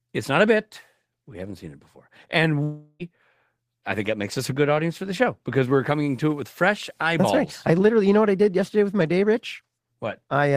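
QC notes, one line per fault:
2.63–3.02 s, long network dropout: about 0.36 s of speech is lost and filled by a buzz or hiss continuing the preceding sound that fades but never reaches silence, likely receiver concealment after audio stopped arriving. The spectrogram shows smeared, repeating harmonics decaying, and the waveform shows a tapering envelope before speech resumes.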